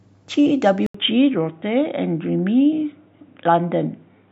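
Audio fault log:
0.86–4.32 s, input switched to a poorer device. After an 80 ms gap, the speech turns dull and boxy. Nothing remains above 3.8 kHz. Faint new background noise sits about 50 dB down. Loudness barely changes. A narrower-band microphone likely took over.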